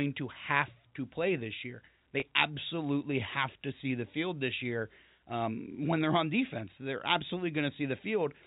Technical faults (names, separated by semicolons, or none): packet loss with pitch repetition